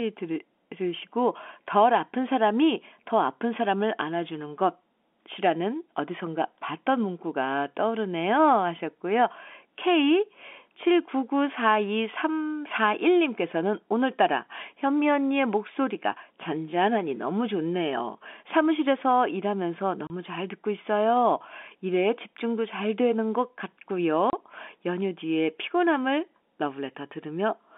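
At 20.07 s and again at 24.3 s, packet loss filled with silence cuts a 30 ms hole into the speech, which fits one lost packet each time. Each gap has hard edges and shows as a flat, empty band on the waveform and spectrogram, inside G.711's narrow telephone band.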